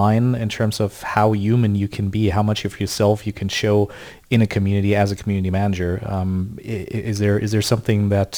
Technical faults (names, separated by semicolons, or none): crude rate conversion